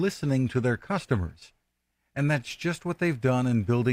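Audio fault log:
0.0–2.5 s, adaptive stream starting at a low bitrate: the speech sounds dull and swishy, with synthetic-sounding treble and stronger smearing, then sharpens abruptly with no gap. The sound points to playback opening on an HE-AAC stream near 32 kbit/s before switching to AAC-LC near 96 kbit/s.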